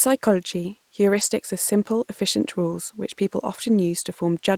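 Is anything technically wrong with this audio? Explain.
Yes. At 1.09–1.27 s and again at 2.67–2.73 s, between "simple efficient" and "which people", there are lost packets rebuilt from error correction. The following packets carried low-bitrate copies that the decoder played, so there's no gap. About 100 ms and 40 ms sound rougher and noisier, showing on a spectrogram as smeared, grainier patches with an unbroken waveform.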